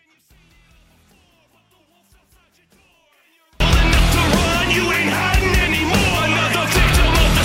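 From the start to about 3.6 s the audio drops by about 38 dB when heard in mono, and the likely cause is one channel inverted: one stereo side has flipped polarity, so everything common to both sides cancels on summing. It differs from a dropout or mute because the sound isn't replaced by silence. What survives is only the difference between the channels, and the full level returns once normal polarity resumes after 3.6 s.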